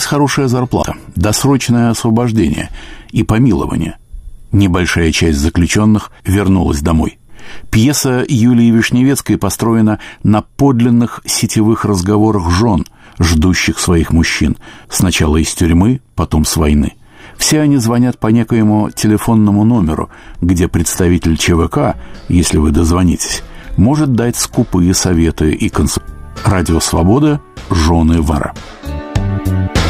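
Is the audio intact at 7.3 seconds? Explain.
Yes, the audio is intact at 7.3 seconds, with no audible fault at that moment.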